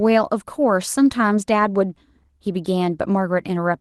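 No technical faults can be heard in the speech, which carries the mild coding texture and the top end stopping near 12 kHz that fit an Opus call path running at around 20 kbps.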